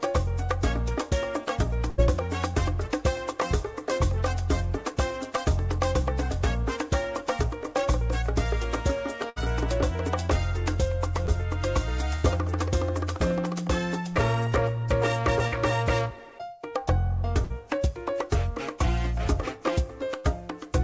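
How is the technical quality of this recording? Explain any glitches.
The recording has seven packet-loss glitches: five longer bursts and two brief concealed drops, all passed through a call codec whose band stops at 8 kHz. On a spectrogram, that band limit appears as empty space above that line for the whole clip.

Burst of packet loss occurs at 1.90–2.00 s, 9.30–9.38 s, 12.16–12.26 s, 15.48–15.54 s and 17.44–17.52 s. At each point, several consecutive packets failed to arrive in time, so roughly 40 to 80 ms of real sound is missing. The receiver stretched the last received sound across the hole and faded it out, which you hear as a held buzz or fading hiss followed by a jump ahead. On a spectrogram, each burst shows frozen, smeared horizontal bands that darken before the signal resumes abruptly. In the waveform, a decaying envelope ends in a discontinuity.

Short concealed packet loss occurs at 11.26–11.30 s and 20.20–20.26 s. 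In each case, a few hundredths of a second, about 20 and 40 ms, never reached the decoder. The gap was filled by continuing the preceding sound's pitch or noise shape and then cross-fading back into the real signal. The result is a quick smear or wobble, and a brief sound can drop out. On a spectrogram, each appears as a thin vertical patch of blurred, repeated texture. In the waveform, it looks like a tiny stretch of suspiciously periodic cycles.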